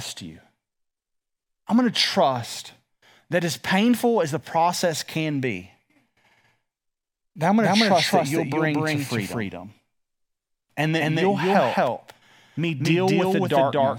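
A speech clip with a doubled audio track from 7.59 s, right after "that I'm", to the end: an equally loud, full-band copy trails by around 200 ms, likely from a slower second capture path. The spectrogram shows every syllable stamped twice, and the waveform's envelope abruptly doubles.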